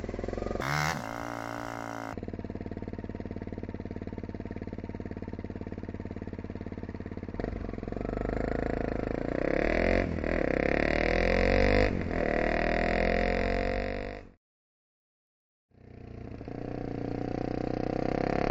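From 0.61 to 2.13 s the sound races at three times speed, pitched up 19 semitones: a wrong sample rate, fitting 16 kHz audio played at 48 kHz.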